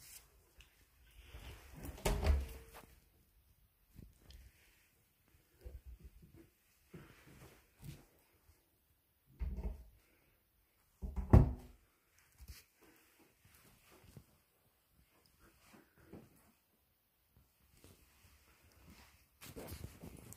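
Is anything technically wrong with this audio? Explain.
No, nothing is technically wrong with this audio.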